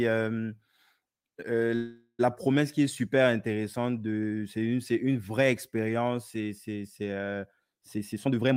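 It's a speech clip with two glitches. From 1.75 to 2.21 s there's a call audio freeze: the last sound is stretched into a fading buzz, ending in about 90 ms of silence, then speech picks up again at "promesse qui est super" with nothing lost, just about 435 ms of added delay, likely from packets stalling and the jitter buffer running dry. Then from 7.96 to 8.53 s you get a jitter buffer speed-up, with speech running at about 155% but at the same pitch, sounding rushed. The receiver is snipping out pitch-period-sized slices to shed about 0.3 s of excess buffered delay.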